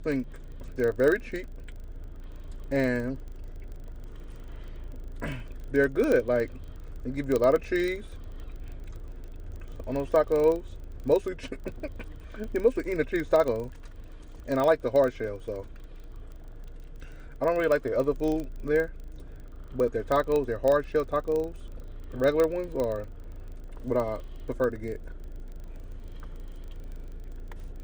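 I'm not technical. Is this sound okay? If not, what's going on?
No. A filter restarted on every block: it forgets what it was in the middle of doing each time a new chunk of sound arrives and starts over from silence. Each restart leaves a tiny tick, 25 per second, heard from start to finish as a buzz that grows louder with the sound.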